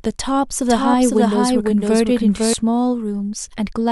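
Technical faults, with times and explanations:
0.69–2.53 s, doubled audio track: a second copy of the speech sits about half a second behind the original and a few dB quieter, so everything seems to be said twice over itself. It's clean and full-band, with no tail or room sound, and it cuts in and out abruptly at both ends. That points to the same signal being mixed in twice, likely from a slower second capture path or two copies left out of step in an edit.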